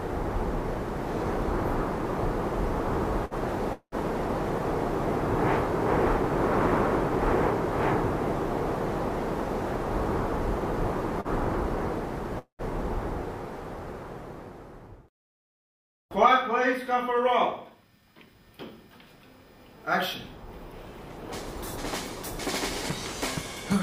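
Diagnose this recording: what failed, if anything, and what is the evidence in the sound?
Twice the sound is briefly held too long with a faint buzzy smear: at 3.25 to 3.34 s the last sound is drawn out by 55 ms, and at 11.21 to 11.41 s by 40 ms. These are short stalls from a late packet. At the network and jitter buffer stage, a packet was not there on time, the buffer ran dry, and the receiver stretched the previous audio until it came. Nothing is lost; the delay grows by the same amount.

Two longer interruptions follow the same pattern. At 3.73 to 3.95 s the sound turns into a fading buzz, then about 100 ms of silence, before resuming where it stopped. At 12.39 to 12.62 s the same happens, with about 110 ms of silence. These are call audio freezes, likely caused by packets held up in the network emptying the jitter buffer. Concealment filled 191 ms and 199 ms respectively, and no audio is missing.

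Two stretches run faster while the pitch stays put. From 9.85 to 10.71 s playback runs at 104 percent, and from 15.84 to 18.35 s at 107 percent, which sounds hurried. This is jitter buffer speed-up. The buffer held more audio than its target, so the receiver trimmed its excess by cutting many tiny pitch-period slices. It removed a few tens of milliseconds in the first stretch and about a fifth of a second in the second.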